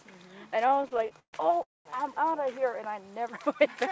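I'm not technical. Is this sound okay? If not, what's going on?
No. From 0.66 to 1.35 s there's repeated stalls (stutter): the audio kept running dry and got padded out 15 times, so it drags and stumbles without losing anything.

Then at 1.63 to 1.87 s there's a call audio freeze: everything stops, mostly silent for about 0.2 s, then resumes where it left off. Delayed network packets are the likely cause.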